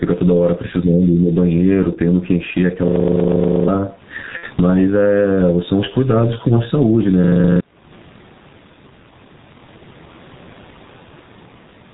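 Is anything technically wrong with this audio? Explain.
Yes, four technical faults can be heard.

Throughout, there is gain pumping. The gain drops by around 20 dB whenever speech gets loud, even though the room noise itself sits about 44 dB below the speech. The likely cause is gain set far too high, so a fast limiter clamps down on each loud sound. A waveform shows a squashed, flat-topped envelope, and a spectrogram shows the noise floor brightening in the gaps.

Also throughout, the G.723.1 codec damage is heavy. The sound is muffled and hoarse, and consonants smear together, which fits a bitrate around 6 kbit/s with 30 ms frames and a slowly updated voice model. On a spectrogram, energy stops sharply at 4 kHz, and the harmonics look blocky in time.

From 2.88 to 3.68 s there is a system hang loop. The computer stalled while the audio hardware kept replaying one 40 ms stretch of its buffer, about twenty times. 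The result is a rough mechanical buzz at 25 Hz, and about 0.7 s of real audio is lost. A spectrogram shows identical vertical slices repeating every 40 ms.

From 4.37 to 4.47 s there is VoIP packet loss concealed by the speech codec. About 60 ms went missing, which fits two lost 30 ms frames. The decoder stretched its last pitch and filter into a fading sound. The waveform shows a stretch with decaying amplitude, and the spectrogram shows a frozen spectrum.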